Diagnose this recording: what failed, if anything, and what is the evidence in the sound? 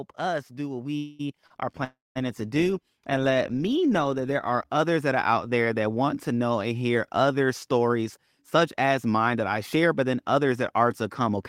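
The call-processing stage's automatic gain control judged the input too quiet and raised its gain by about 7 dB, starting at 0.19 s and rising until 3.37 s, just before "me know that there". This is automatic gain rising. The level climbs gradually over about three seconds, and speech and background noise swell together. That shared rise marks it as a gain change rather than the talker getting louder.

Two call audio freezes occur, at 0.97–1.21 s and 1.84–2.17 s. Their likely cause is network packets held up in transit, which left the receiver's jitter buffer empty. In the first, the last sound is continued for about 217 ms as a fading buzz or hiss. In the second, the fill lasts about 313 ms and includes roughly 200 ms of silence. Speech resumes exactly where it stopped each time, so a gap is inserted and nothing is lost.

A short stall from a late packet occurs at 1.47–1.52 s. One packet missed its playout deadline in the jitter buffer, and the receiver stretched the preceding sound by about 30 ms until it arrived. 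The result is a briefly held sound with a slight buzz or dip. The speech then continues from the same point, with nothing missing but the timing pushed a little later.

A jitter buffer speed-up runs from 7.88 to 10.8 s, starting just after "know and hear other". The buffer was holding more audio than its target, so the receiver trimmed short pitch-period pieces repeatedly, about a fifth of a second in total. Speech plays at about 107% speed with unchanged pitch and sounds slightly hurried until the excess delay has been drained.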